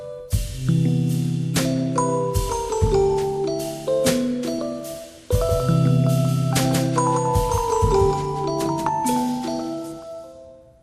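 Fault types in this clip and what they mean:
MP2 compression: The sound is dull throughout, with gurgling, grainy distortion and flickering upper bands. This is likely low-rate MPEG Layer II coding starving its sub-bands of bits.
DAB burbling: Brief blips of noise occur near 0.88, 6.72 to 6.79 and 10.02 seconds, where corrupted data put wrong samples into single sub-bands.
doubled audio track: From 5.49 to 8.89 seconds a second, somewhat quieter copy of the sound follows about a fifth of a second behind, likely from an out-of-step duplicate path.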